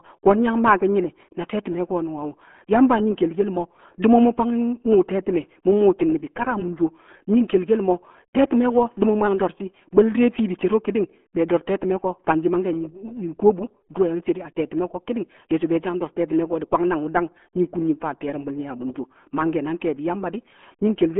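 Speech, carried throughout by the RealAudio 14.4 codec. Nothing passes above 3.7 kHz. Heavy coding damage leaves it muffled and gargly, which fits an 8 kbit/s stream.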